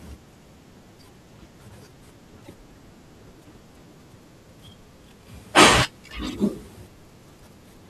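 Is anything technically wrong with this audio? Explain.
Yes. From 2.44 to 2.50 s the speech skips ahead briefly. This is likely a broken MP3 bit reservoir: after missing frames, the next frame's borrowed data comes from the wrong frame. It spans roughly two to three 24 ms frames.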